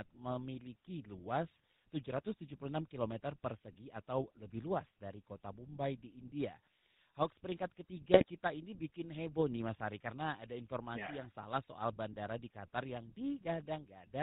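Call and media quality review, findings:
GSM full-rate codec, throughout: buzzy, gravelly speech, nothing above 4 kHz, consistent with 13 kbps full-rate coding. Vocal-tract model driven by regular pulses, excitation decimated to every third sample; codec damage plainly audible.

GSM bit errors, 8.14–8.24 s: brief squawk/gargle burst. Corrupted filter, pitch or gain parameters distort spectrum and level per frame. Length fits about four 20 ms frames, pointing to a radio link with a few percent bit errors.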